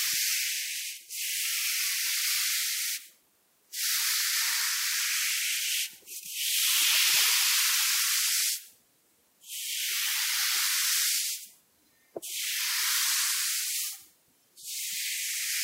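No technical faults are audible.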